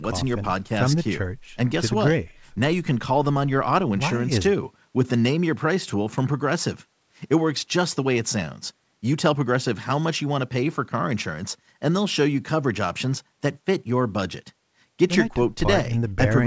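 No technical faults can be heard in the speech. The call path audibly limits the bandwidth, with nothing above 8 kHz, which points to a wideband call codec such as G.722.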